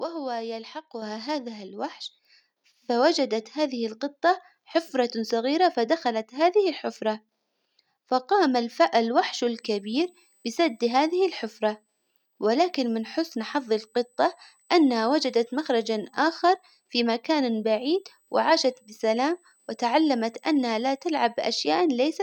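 At 1.02 s and again at 2.04 s the microphone volume steps up, each time by about 5 dB. The call software judged the input too quiet and raised the device level in one jump, so the speech and the background noise both get louder together at each step.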